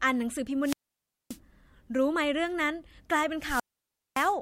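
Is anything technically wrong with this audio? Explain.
Yes. There are two wireless microphone squelch dropouts, at 0.62 to 1.39 s and 3.39 to 4.35 s. Each time the analogue FM signal fades, hiss swells briefly, then the receiver's squelch cuts the output for about 0.58 s and 0.57 s of near silence before the speech comes back.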